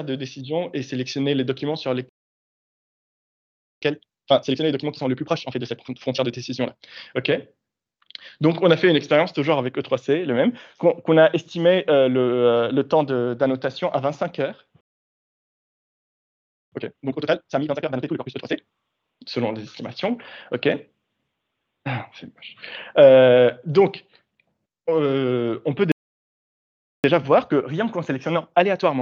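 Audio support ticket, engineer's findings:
Playback stall: output drops to silence mid-flow at 2.09–3.82 s (1.73 s), 14.81–16.72 s (1.91 s), 25.92–27.04 s (1.12 s). Likely player starved of buffered data or its audio thread blocked; sound resumes after each gap.

Time-compressed catch-up: hurried audio at normal pitch, directly after each stall. 3.82–6.82 s at 1.5x, 16.72–18.62 s at 2x, 27.04 s to end at 1.15x. Player trims backlog by cutting and cross-fading short segments.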